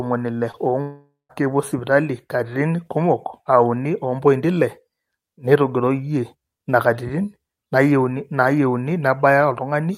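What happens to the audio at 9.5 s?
Nothing goes wrong at 9.5 s; the speech continues intact through that moment, with no dropout, click or distortion.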